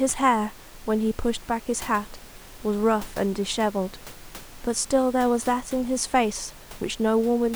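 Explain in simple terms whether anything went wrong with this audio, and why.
Nothing went wrong; faint background sound is the room.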